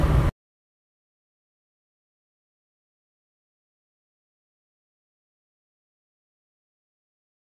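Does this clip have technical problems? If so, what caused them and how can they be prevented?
No, the signal shows no technical problems that can be heard, so there is nothing here to trace to a cause or prevent.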